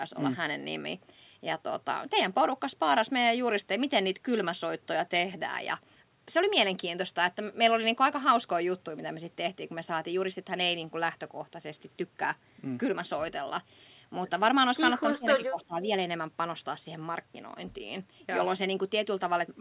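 Speech, band-limited to 4 kHz in a way that fits a narrowband G.711 call path, with one fault: speech suppressed in double talk between 15.13 and 15.77 s. Within that window the talker is turned down, totalling somewhere under half a second, with the deepest dips around 20 dB down. The likely cause is the far end talking at the same moment, so the echo canceller could not tell this voice from loudspeaker echo and attenuated it along with the echo.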